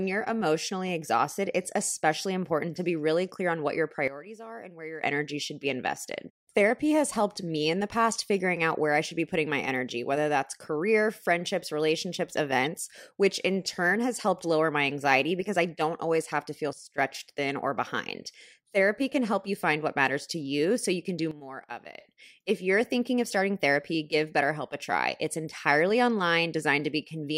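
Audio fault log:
4.08 to 5.03 s, 16.73 to 16.98 s and 21.31 to 22.0 s: sudden gain jump. The level drops abruptly by about 15 dB after "clear on what your", by about 15 dB again after "always have to feel", and by about 12 dB in the third span. The speech and the background noise fall together and then snap back. This is likely a digital gain setting applied from one sample to the next with no ramp, so the edges of each drop are hard steps rather than fades.
12.65 s: corrupt frame decoded. Just after "that's career friendships relationships", a brief squeak-like burst cuts in before "which in turn has". It peaks at roughly -25 dBFS. Damaged bits in a few compressed frames were decoded anyway, so misread gains and codes put energy at the wrong frequencies. The result is a short artificial blip that does not belong to the speech.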